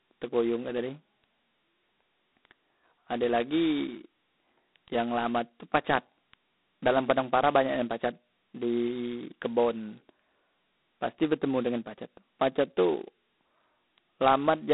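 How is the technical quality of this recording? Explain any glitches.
Quality's pretty rough: the whole clip has been through G.726 ADPCM coding, and it shows. Throughout, the speech carries a harsh, rasping hiss that rises and falls with its level. That's coarse quantisation of the sample-to-sample prediction error, heavy enough to suggest the 16 kbit/s mode. It's squeezed into a telephone band of about 200 Hz to 3.7 kHz, with nothing above 3.9 kHz.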